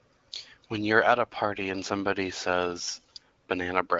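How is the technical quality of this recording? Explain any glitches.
No glitches or faults heard.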